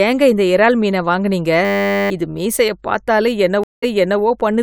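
From 1.65 to 2.1 s, after "இந்த இறால் மீனை வாங்குனீங்க", a system hang loop repeats one 10 ms slice 45 times, giving a 100 Hz buzz. It shows as identical waveform cycles and spectrogram stripes at 100 Hz multiples, and roughly half a second of speech is lost before "இது மீசைய".

From 3.64 to 4.21 s, a stream reconnect leaves a 189 ms flat gap in the waveform, then the sound restarts 384 ms earlier, audibly repeating material already heard.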